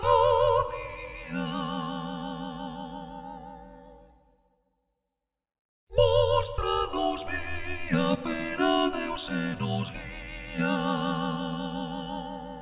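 No technical faults can be heard anywhere in this clip. Nothing in the sound points to a problem in how it was captured or carried.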